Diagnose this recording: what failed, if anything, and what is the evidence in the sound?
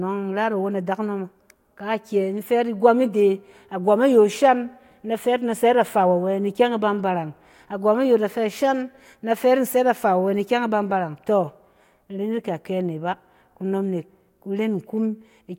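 Nothing failed; no faults detected.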